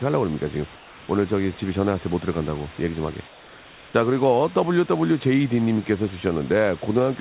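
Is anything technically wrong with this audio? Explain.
Yes. Comfort noise has replaced the background twice in this speech clip, from 0.76 to 1.08 s (320 ms) and from 3.28 to 3.94 s (660 ms). The likely cause is discontinuous transmission: the sender stopped sending during pauses, and the receiver filled each gap with synthetic noise roughly matched to the room. The real background, already about 25 dB below the loudest speech, gives way to a flat, featureless hiss about 2 dB quieter in the first gap and about 3 dB quieter in the second. The whole clip stops at 4 kHz, which fits a narrowband telephone codec.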